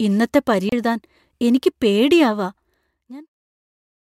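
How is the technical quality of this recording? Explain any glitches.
One glitch stands out in this speech recording, a CD skip between 0.69 and 0.72 s. It sounds like a short tick and a brief dropout of about 30 ms, after which the speech resumes from a slightly different point. A jolt or surface flaw knocked the laser onto a neighbouring turn of the disc's spiral, so the player muted briefly and picked up the track out of place. The recording closes with a smooth fade-out that begins around 2.5 s and reaches silence by 3.35 s.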